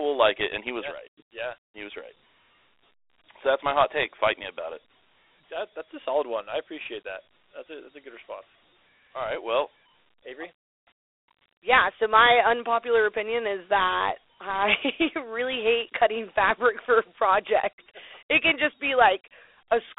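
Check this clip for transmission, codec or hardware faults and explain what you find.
One codec fault runs through the whole speech clip: Dialogic VOX ADPCM. Coarse 4-bit adaptive step coding, consistent with a 32 kbps stream, leaves a plainly audible gritty hiss trailing the speech. The sound is squeezed into a phone band of 300 Hz to 3.6 kHz, with nothing above 3.8 kHz.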